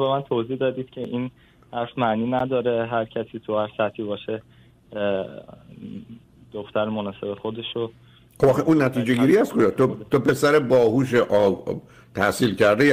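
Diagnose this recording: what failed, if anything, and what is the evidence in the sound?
Blocks of digital silence at 1.04 s and 2.39 s, 5.8 and 11.6 ms, each short enough to be heard as a tick or dip rather than silence. The driver missed buffer fills, fitting 256- and 512-sample buffers.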